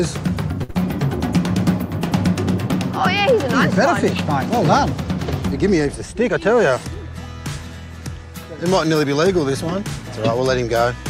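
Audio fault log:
0.63 to 0.80 s, short stall from a late packet: a packet arrived late, the jitter buffer ran dry, and the receiver held the last sound for about 56 ms until it arrived. Nothing is lost, but the sound lingers with a faint buzz or dip, and everything after runs 56 ms later.
0.71 to 0.77 s, short concealed packet loss: inside that stall, about 40 ms of audio never reached the decoder. Roughly 36 ms of synthetic continuation from the preceding sound fills the gap, heard as a brief smear or wobble before the real signal blends back in.
5.92 to 6.48 s, jitter buffer speed-up: the buffer held more audio than its target, so the receiver trimmed short pitch-period slices repeatedly, removing about 50 ms in total. The sound plays at 107% speed with unchanged pitch and comes across hurried.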